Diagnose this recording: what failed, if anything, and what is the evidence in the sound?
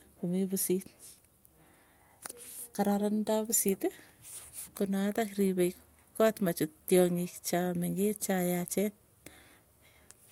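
Nothing in the speech recording points to a failure at any stage of the chain, from capture and conversion through processing, transport, storage and playback.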